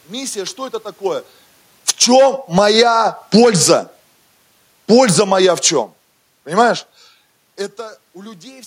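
Automatic gain falling begins at 1.76 s, right after "миссия что это такое", and runs until 7.07 s: the gain control judged the input too loud, or its background noise too strong, and pulled its gain down by about 11 dB over those five seconds, so the speech and the room noise behind it sink together. Overlapping this, automatic gain rising runs from 2.1 to 4.07 s, where the control decided the level was now too quiet and pushed the gain back up by about 7 dB, making voice and background swell in step for roughly two seconds before the downward drift resumes. The level shifts near 1 s and 7 s sound like the talker moving relative to the microphone and aren't part of this gain behaviour.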